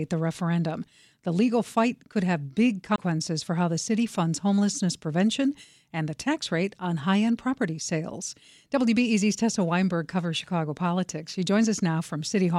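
At 2.96 to 2.98 s the speech breaks with a CD skip: the laser jumped tracks, so playback mutes for roughly 20 ms after a tick and resumes elsewhere. A waveform shows a click, a flat gap, then a discontinuity; a spectrogram, a vertical line and a gap.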